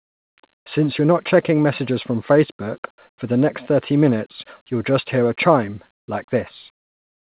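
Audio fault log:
5.98–6.08 s, comfort noise in place of the background: after "just hear a chime", 100 ms of real background becomes steady featureless hiss about 31 dB quieter, likely from discontinuous transmission. The spectrogram shows a smooth, even wash and the waveform is nearly flat.
6.06 s, onset clipped by the voice detector: the next sound begins abruptly, missing its first 20 ms, which points to a slow voice detector. The waveform starts suddenly with no ramp.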